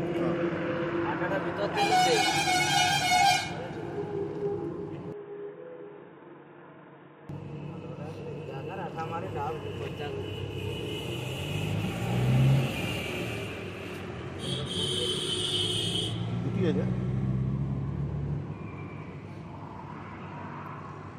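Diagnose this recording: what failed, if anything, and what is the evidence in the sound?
Input switched to a poorer device, 5.12 to 7.29 s, likely at driver level: the sound narrows to nothing above 3.8 kHz, drops a few dB and gains new noise.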